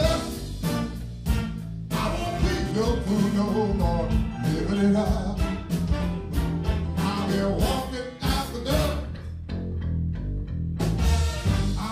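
From 1.94 to 3.39 s there's a GSM phone buzz: a hard, raspy 217 Hz rasp full of harmonics, sitting about 20 dB under the audio. A nearby 2G phone's bursts got rectified by the audio circuit, and this one's a data transfer, so it drops in briefly.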